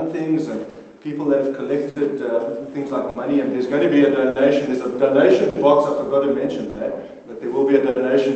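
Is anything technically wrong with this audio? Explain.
Yes. The sound keeps briefly freezing and resuming, and this comes from two related faults.

The first is a short stall from a late packet at 0.70, 1.90, 3.10, 4.30, 5.50, 6.70 and 7.90 s, each lasting about 80 ms. At each point a packet arrives late, the receiver's buffer runs empty, and it holds the last sound for about 60 ms until the data arrives. Nothing is dropped, and playback picks up exactly where it left off. What you hear is a held, faintly buzzy smear rather than a gap. That sets it apart from packet loss, where a piece of audio would be missing.

The second is clock drift between sender and receiver, and it runs through the whole clip. The sender's clock runs roughly 5 percent slow, so audio reaches the receiver more slowly than it plays out. The buffer keeps draining and hitting empty. Small timing hiccups recur all through the clip, at uneven intervals.

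The call path itself, with its 8 kHz upper limit, fits Opus at around 24 kbps.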